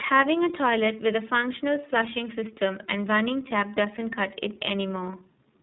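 From start to finish the speech carries tandem speech coding: it has passed through a low-rate speech coder twice, with a plain telephone link between, consistent with iLBC at around 15 kbit/s on both ends of a G.711 A-law hop. The second coder re-encodes the first one's errors, so the voice sounds rough, dull and warbly. A spectrogram shows nothing above 3.8 kHz and smeared, unsteady harmonics; the waveform looks coarse and blurred at onsets.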